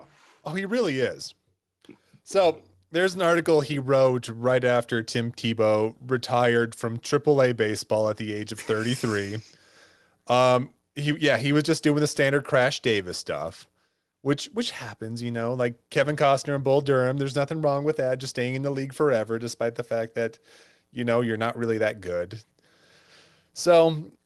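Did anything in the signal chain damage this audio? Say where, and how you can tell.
Yes. At 1.02 s the microphone volume is stepped up: speech and background noise both jump by about 3 dB in one instant and stay at the new level. This is in call processing. The call software's automatic gain control judged the input too quiet and raised the device's input volume in a single step instead of ramping it. The audio also carries Opus-style coding noise and a top end ending near 12 kHz, which fits a bitrate around 24 kbps.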